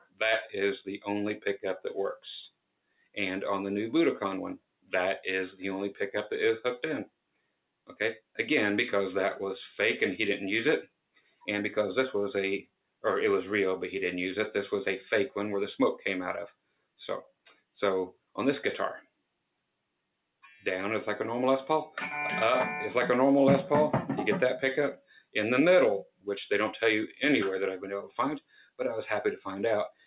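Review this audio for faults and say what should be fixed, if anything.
A noise suppressor made for speech has been left on over music or sounds, and it is active for the whole clip. It treats sustained tones and decaying tails as noise, so the level keeps swinging by a few decibels as it ducks held sound and lets attacks through. The result pumps and thins throughout. On a waveform the envelope breathes unevenly between transients. On a spectrogram, sustained horizontal bands fade and recover irregularly while vertical onset lines stay intact.

There are also six stretches where the suppressor cuts the sound harder than it cuts the rest: 0.0–0.2 s, 2.5–4.93 s, 7.05–8.38 s, 10.85–13.04 s, 16.52–20.44 s, and 24.97 s to the end. The deepest drop is about 17 dB in the first stretch and about 21 dB in each of the others. Within each window the affected portions add up to anywhere from a fraction of a second to about a second and a half. 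Held material sinks and tails are chopped short. On the waveform these look like sudden envelope collapses after each attack. On the spectrogram they appear as dark gaps across the band. Above all of this, the spectrum is empty above 4 kHz, which fits the narrowband call codec the audio passed through.

To fix this, disable the noise suppressor, or switch it to a music mode, whenever the source is anything other than speech.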